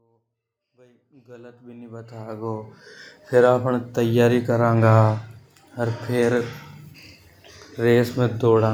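There are no technical faults to describe in this speech; the level rises in a smooth fade-in that is complete by about 3.17 s.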